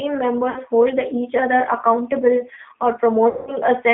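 G.729 codec damage runs through the whole clip. The speech is rebuilt from a vocal tract filter, a pitch predictor and a handful of pulses per 10 ms frame, at a rate that sounds like the 8 kbit/s G.729A variant. The result is plainly rough and synthetic. The band is held to roughly 200 Hz to 3.5 kHz, so there is no air or sibilant sparkle above that.

VoIP packet loss concealed by the speech codec occurs twice: at 0.50 to 0.62 s, where about 60 ms of audio went missing, and at 3.29 to 3.56 s, where about 180 ms did. In each gap the decoder kept repeating its last pitch and filter at falling gain, smearing the sound into a fading buzzy tone or coloured noise. The second, longer gap decays further and leaves the speech weak and distorted briefly after it resumes.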